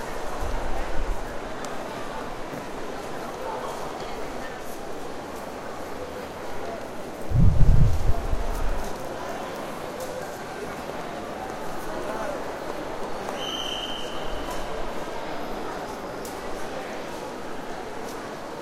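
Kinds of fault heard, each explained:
No technical faults are audible.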